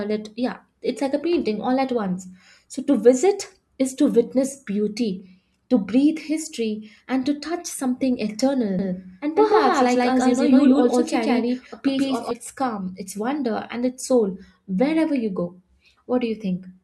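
From 8.79 s to 12.31 s the speech is a doubled audio track: a second full-band copy runs roughly 150 ms behind, about as loud as the original, so every syllable gets a flat, dry slapback with no room tail. It most likely comes from the same signal being captured again through a slower path. On a waveform each burst repeats offset; a spectrogram shows every onset stacked twice. The doubling begins abruptly at 8.79 s, just before "its calm its wonder", and the copy stops abruptly at 12.31 s.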